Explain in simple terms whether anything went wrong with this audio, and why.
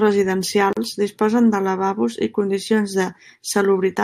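Something did go wrong, right near the start. At about 0.73 s the speech drops out for roughly 38 ms, until about 0.77 s, and then picks up exactly where it stopped. That's a gap at a join of encoded pieces. The audio was evidently compressed in separate chunks and then stuck back together without trimming. Each chunk brings a bit of built-in silence at its edges, so you get a tiny hole with softened edges right at the seam.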